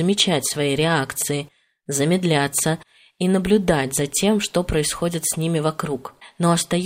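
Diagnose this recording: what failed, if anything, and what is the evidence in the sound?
Faint regular ticks run through the speech from 0.19 s to 6.81 s, about ten per second. These clock slip clicks most likely come from a converter clocked independently of the rest of the chain. A drift of roughly 200 ppm adds up to a whole sample about every tenth of a second, and that sample is dropped or repeated. Buffer dropouts would leave irregular gaps, but these single-sample slips tick evenly.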